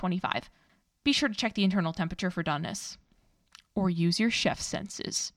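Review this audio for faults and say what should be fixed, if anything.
No faults; nothing to fix.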